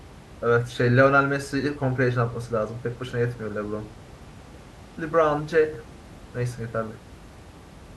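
Nothing in this speech stood out on listening, with only the room's own background noise audible at about 21 dB below the speech.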